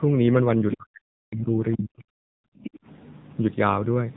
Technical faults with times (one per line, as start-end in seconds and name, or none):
0.00-4.17 AMR narrowband mobile codec
1.72-1.77 other side's voice leaking through